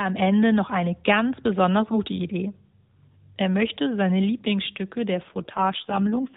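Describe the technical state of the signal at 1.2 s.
At 1.2 s the speech is intact, with no dropout, click or other fault, only the band-limited telephone character of the AMR narrowband mobile codec carrying it.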